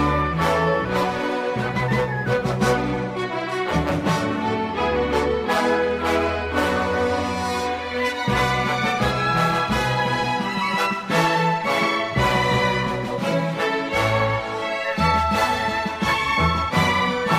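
From 9.54 to 11.50 s, a block size mismatch (truncated) sets in: a stage writes blocks longer than the next one reads and the tail of each is discarded. This leaves a 43.1 Hz buzz, which fits 1024-sample blocks at 44.1 kHz, while the sound keeps a 1.0 speed ratio.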